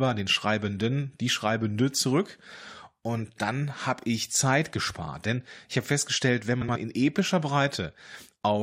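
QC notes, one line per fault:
2.57–2.63 s, 3.99–4.04 s, 6.61–6.77 s: frames out of order. Neighbouring blocks were decoded swapped, roughly 23 ms each in the first two and 70 ms at 6.61 s, so each stretch plays halves exchanged: a garbled flutter, no time lost.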